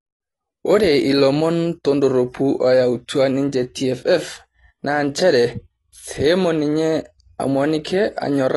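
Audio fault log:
throughout: AAC compression, likely near 32 kbps; the speech stops at 11.5 kHz and sibilants smear and warble audibly, which a plain low-pass filter would not cause.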